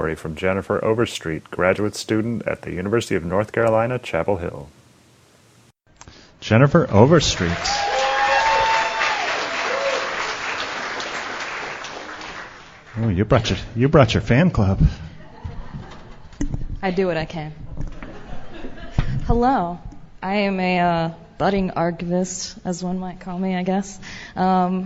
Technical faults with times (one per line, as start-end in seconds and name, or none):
none